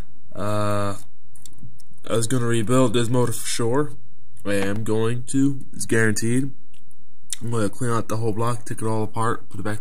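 A constant DC offset runs the whole length of the clip, so the waveform sits shifted off zero. You won't hear it as such, but it eats into headroom and shows up as steady energy right at the bottom of the spectrum. At 4.76 s there's a repeated buffer: one tiny slice, about 1.45 ms long (which fits a 64-sample buffer), plays twice more because fresh audio didn't arrive in time, losing a few milliseconds. At that size it comes across as a quick click or brief buzz rather than a stutter.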